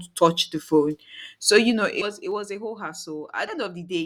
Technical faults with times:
1.63-2.46 zipper noise
2.01-2.05 compressed frames skipped
3.47-3.51 compressed frames skipped

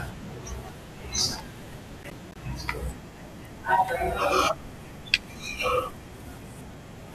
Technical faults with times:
2.03-2.36 processor overload crackle

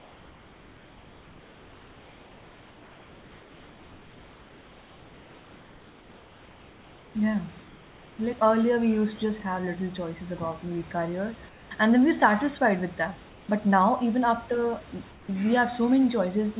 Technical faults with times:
0.00-7.15 comfort noise in place of the background
7.65-8.19 comfort noise in place of the background
11.49-11.71 comfort noise in place of the background
13.29-13.49 comfort noise in place of the background
15.11-15.29 comfort noise in place of the background

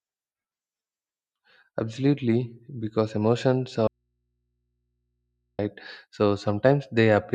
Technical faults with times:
3.87-5.59 audio dropout to a faint residue

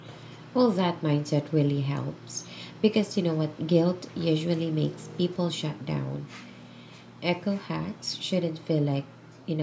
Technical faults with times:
none

